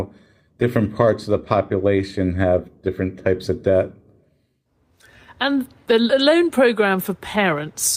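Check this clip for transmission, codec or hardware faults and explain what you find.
Nothing stood out on listening to this speech clip, and there was no fault to point to at any moment.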